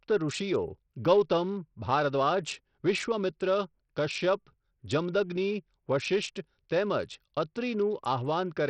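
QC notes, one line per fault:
throughout: Bluetooth SBC compression. Treble is gone above 10.6 kHz and gritty noise rides on the speech, likely from SBC starving its top sub-bands at a 64 kbps-like bitrate.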